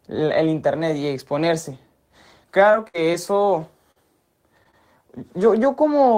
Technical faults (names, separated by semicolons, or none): repeated packet loss (robotic sound)